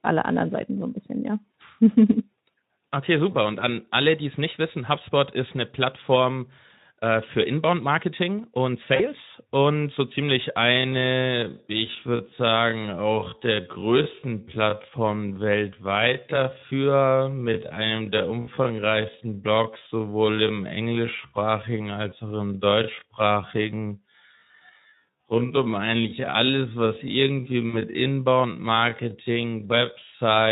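VoIP packet loss concealed by the speech codec occurs at 8.95 to 9.07 s, just before "und so ziemlich". About 40 ms of audio went missing, which fits two lost frames. The decoder filled the gap by extending its last pitch and spectral shape at falling gain, so the speech briefly turns into a fading smear and stays weak as it recovers.

A time-stretched section runs from 10.57 s, right after "und so ziemlich", to the end. The pace drops abruptly to 0.525 times normal speed while the pitch stays put. This is likely software stretching that repeats short pieces to lengthen the audio, and it makes the speech drag.

The same packet-loss concealment returns inside the stretched part at 18.41 to 18.49 s, with about 60 ms missing (three frames' worth), and at 27.69 to 27.77 s, with about 40 ms missing. Each is a short decaying patch with a brief weak recovery. Beneath all of this the Speex coding adds only a light hoarse graininess.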